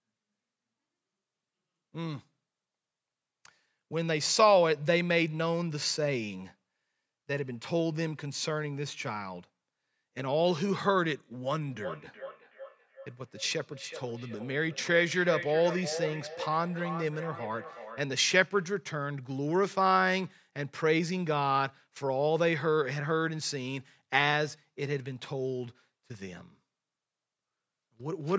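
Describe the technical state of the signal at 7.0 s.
At 7.0 s the speech signal is intact, with no fault present, only the normal call microphone processing that trims the lowest bass and leaves nothing above 8 kHz.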